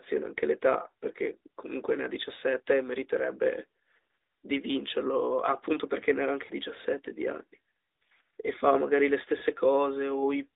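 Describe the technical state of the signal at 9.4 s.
Right at 9.4 s there's a short patch of lost AMR speech frames, from 9.38 to 9.44 s, about 40 ms, which fits two dropped 20 ms frames. The decoder papers over the gap by repeating the last good pitch and vocal tract settings at falling gain, so you get a quick dip and warble in the narrowband-sounding speech before it picks back up.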